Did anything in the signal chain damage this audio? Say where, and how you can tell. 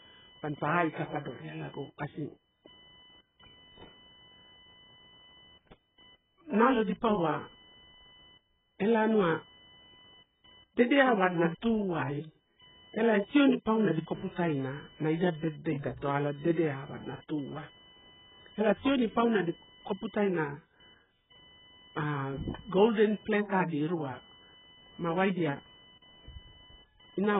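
Yes, at two stages. The first is the analogue wiring. A faint whine-like buzz runs for the whole clip, pulsing at around 1 kHz and sitting roughly 30 dB below the speech. It tracks nothing in the speech itself, which is the sign of computer activity noise. Load swings in the processor, graphics card or mouse modulate the shared ground, and the audio input picks up that ground current as a chirping buzz that jumps up and drops back with the computer's activity.

The second stage is the codec. The speech has nothing above 3.8 kHz, so sibilants are dull, and the whole clip is heavily smeared with a watery, warbling texture. The cause is likely AAC compression: AAC-LC pushed to an extremely low rate, which fits something near 8 kbps. At that rate the encoder pulls its cut-off down and starves the remaining bands of bits, producing holes and swirling artefacts throughout.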